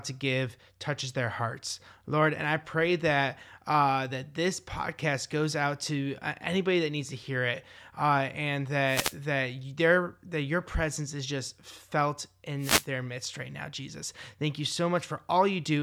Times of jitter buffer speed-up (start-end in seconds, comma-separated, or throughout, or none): none